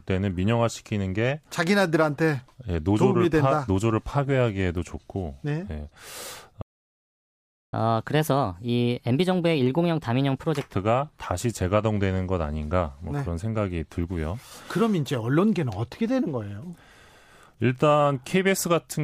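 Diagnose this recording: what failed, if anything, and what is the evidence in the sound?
Playback stall, 6.62 to 7.73 s: the speech cuts to silence for about 1.1 s, likely because the player's buffer ran dry or its thread blocked.

Catch-up at higher speed, 7.73 to 10.73 s: the speech then plays at 1.25 times speed, roughly four semitones higher, as the player resamples its backlog to recover.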